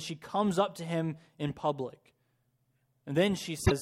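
At 3.62 s, near the very end of the speech, damaged data in a compressed stream breaks the sound for about a tenth of a second, until 3.72 s. Some bytes in the compressed stream are wrong at this point. The decoder cannot read those frames correctly. It loses sync and hunts for the next valid frame header. What comes out is a brief chirp, squawk, click or short hole in place of the speech.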